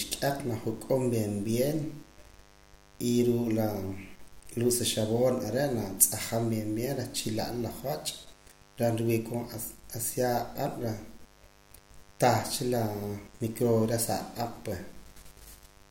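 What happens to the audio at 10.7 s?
At 10.7 s a steady, raspy buzz sits under the speech, roughly 30 dB below it. It isn't a momentary event: this mains buzz runs through the whole clip, and 10.7 s simply falls inside it. It comes from sharp switching spikes, such as from a dimmer, a rectifier or a missing shield, getting into the signal twice per 50 Hz mains cycle. That is why harmonics of 50 Hz extend up into the kilohertz range and give the tone its rasp.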